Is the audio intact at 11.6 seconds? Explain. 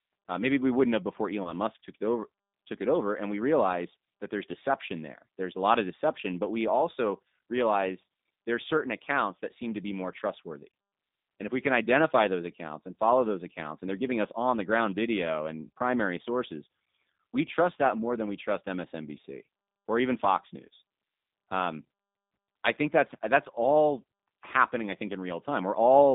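No. At 11.6 s, as across the whole clip, the speech carries G.729 codec damage. It is rebuilt from a vocal-tract filter, pitch predictor and sparse pulses, at a rate consistent with 8 kbit/s, in a 200 Hz to 3.7 kHz band. Unlike simple band-limiting, it sounds rough and synthetic, not merely muffled.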